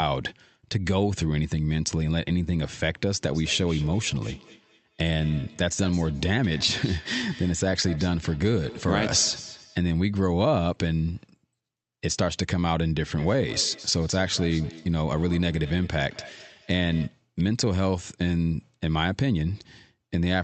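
It's a speech recording with feedback echo between two devices, from 3.29 to 9.86 s and again from 13.12 to 17.2 s. Each phrase comes back about a fifth of a second later, thinner and ringing, peaking at about 18 dB below the speech. That points to a second device in the room playing the call while the first microphone picks it up again, which its own echo canceller can't remove. The speech itself is band-limited to around 8 kHz by the call codec.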